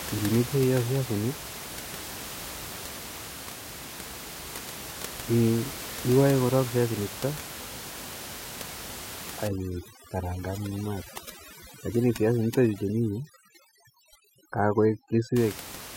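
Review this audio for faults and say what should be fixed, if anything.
From 9.48 to 15.36 s there's overdone noise removal: the denoiser is set so hard that bands near its noise estimate get pulled right down, so the room noise (about 13 dB under the speech) drops and breaks up into twinkly specks. Ease the reduction amount back so the room noise stays audible rather than gated out.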